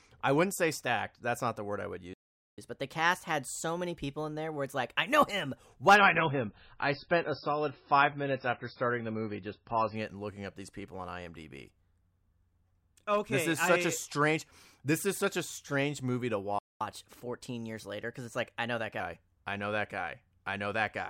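At 2.13 s the speech drops out for about 0.44 s, until 2.58 s; this is a playback stall, likely the player running short of data or its thread being held up, and the audio resumes where it stopped. From 2.58 s to 5.58 s the player plays catch-up at higher speed, resampling its backlog at 1.1 times normal rate, so the speech runs quicker and sits about a semitone and a half sharp before settling back.

From 5.96 s to 9.96 s an adaptive stream at a lower bitrate takes over, the sound pointing to a steep drop from a normal MP3 rate to a very thin one. The speech turns smeared with codec artefacts, switching abruptly in and out with no gap.

A second playback stall silences the speech from 16.59 s to 16.81 s, about 0.22 s, likely from the same data shortage. The catch-up at higher speed follows until 19.0 s, again 1.1 times fast and roughly a semitone and a half high.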